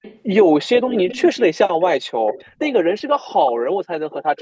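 Faint repeats of the speech trail about 279 ms behind at 0.02–0.2 s, 0.76–1.43 s, 2.27–2.45 s, 4.1–4.16 s and 4.36–4.41 s, sitting well below the main speech. That's echo leak, likely a loudspeaker-side echo canceller letting some microphone pickup slip back.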